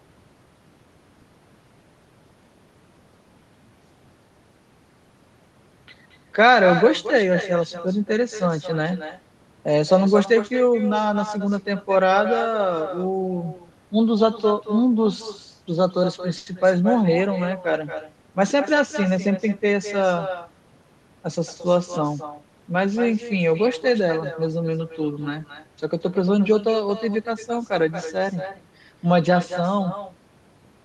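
Throughout the recording, each phrase of speech is followed about a fifth of a second later by a quieter copy, roughly 11 dB down, sounding thinner than the original. This is echo with no canceller: the far end played the call over a loudspeaker, its microphone caught it, and nothing subtracted it before sending it back. Room reverberation is a smooth tail that decays straight off the sound. Here the copy is a distinct, delayed repeat with a clear gap.

From 16.37 to 16.48 s comes a short stall from a late packet. A packet arrived late, the jitter buffer ran dry, and the receiver stretched the last sound for 90 ms, which is audible as a sound held too long. Playback then resumes exactly where it left off, and the overall delay grows by 90 ms. Packet-loss concealment papers over a gap where audio is missing. Here nothing is lost; the sound is simply held too long.

Between 18.42 and 19.74 s a jitter buffer speed-up follows as the receiver works that extra delay back off. 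It cuts out short pitch-period-length slivers, about a tenth of a second in total, and the speech runs at 106% of normal speed, sounding hurried. The pitch stays the same, and that distinguishes it from a resampling or clock-drift speed change, which would raise the pitch along with the tempo.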